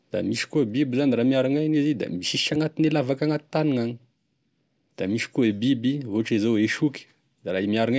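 No technical faults can be heard anywhere in the speech recording. There is nothing here to place in time or explain.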